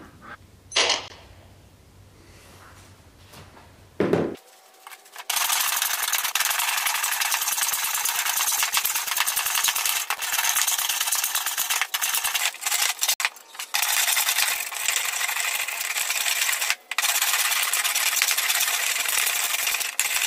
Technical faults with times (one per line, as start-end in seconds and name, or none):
1.08-1.10 block of digital silence
10.17 block of digital silence
13.14-13.20 block of digital silence